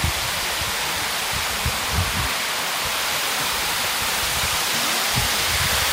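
No technical faults are audible.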